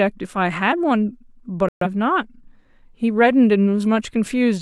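A digital broadcast dropout runs from 1.68 to 1.87 s: the receiver stopped getting valid frames and muted, so the speech cuts to silence for about 0.18 s and resumes later in the programme, the gap fitting a few failed frames whose content is gone.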